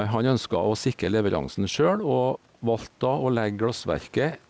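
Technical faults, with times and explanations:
throughout: gain pumping. The faint room noise sits about 39 dB below the speech, the gain swings by around 5 dB, and loud and soft passages sound squashed together. This is likely input gain set far too high, with a fast limiter or compressor pulling it down on every loud sound. A waveform shows a flattened envelope. A spectrogram shows everything beneath an 8 kHz ceiling.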